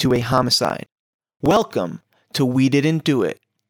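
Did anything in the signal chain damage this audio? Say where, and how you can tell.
Yes, at the driver or buffer stage. From 0.05 to 1.62 s the speech has periodic USB or driver dropouts: about thirty ticks every 54 ms, each where around 10 ms of audio is skipped. A spectrogram shows evenly spaced thin broadband lines, and the waveform jumps abruptly.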